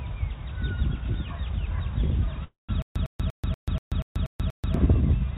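Call audio freeze from 2.44 to 2.71 s: the last sound is drawn out into a fading buzz or hiss and then about 160 ms of silence, which likely means delayed packets left the jitter buffer empty. When the audio resumes, nothing is lost, but everything after it runs about 246 ms late.

Stutter with silent gaps from 2.82 to 4.74 s: a 104 ms fragment repeats eight times, every 240 ms, with 136 ms of digital silence between repeats. This is likely a stalled stream replaying its last chunk on each retry. The audio due in that span is gone, and the G.711 call path cuts off everything above 4 kHz.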